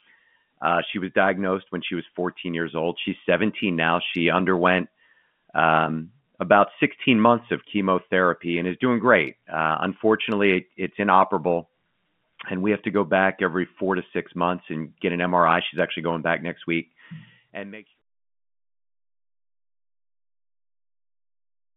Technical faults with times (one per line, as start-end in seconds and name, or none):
none